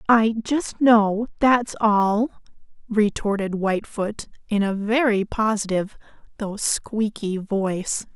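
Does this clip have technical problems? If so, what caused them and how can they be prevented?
Yes. From the start to 2.0 s the speech sounds dull and muffled. This is de-emphasis applied wrongly. A treble cut meant to reverse pre-emphasis was applied to audio that had no pre-emphasis, or was applied a second time. The result is a smooth downward slope in the highs, with 10 kHz sitting about 13 dB below 1 kHz. To prevent it, apply de-emphasis only when the source is known to carry matching pre-emphasis, and apply it exactly once.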